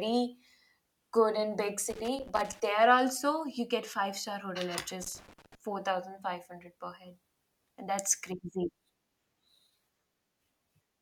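A speech recording with two bursts of loose connector crackle, from 1.90 to 2.60 s (after "good in big", before "there also you get") and 5.02 to 5.55 s (after "five star hotel at"), where a worn contact intermittently breaks the signal, giving a chopped waveform with spiky dropouts and broadband vertical streaks on a spectrogram.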